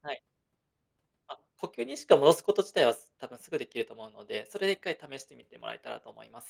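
No faults can be heard anywhere in this speech.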